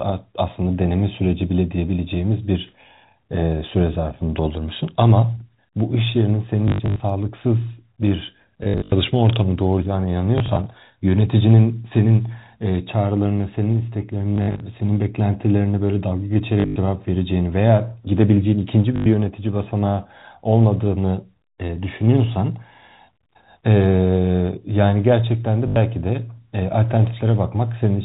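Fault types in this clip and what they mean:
Packet loss with last packet repeated: bits of the stream went missing, and the receiver just replayed the last good packet to plug each gap. You get short robotic stutters and a buzz around 50 Hz, which fits 20 ms packets. It happens seven times, at 6.68, 8.64, 10.38, 14.36, 16.6, 18.96 and 25.68 s. The longest unbroken run, 100 ms, comes at 16.6 s and again at 18.96 s.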